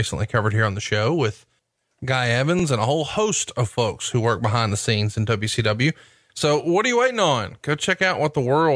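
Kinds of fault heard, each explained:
Nothing stood out on listening to this speech recording.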